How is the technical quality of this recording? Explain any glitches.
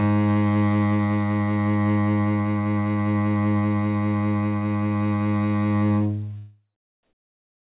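The recording is narrowband, with nothing above 4 kHz, consistent with a G.711 A-law call path at 64 kbps. One glitch stands out at the very end.

From 7.03 s to the end of the clip, about 0.63 s, comfort noise replaces the background. Once the music falls to a quiet tail about 42 dB below its loud passages, the sender's voice detector likely treated it as silence and stopped transmitting. The receiver then filled the gap with synthetic noise matched only roughly to the background's spectrum. The real ambience, with its texture, gives way to a steady, featureless hiss about 16 dB quieter, so the ending sounds abruptly flattened rather than decaying naturally.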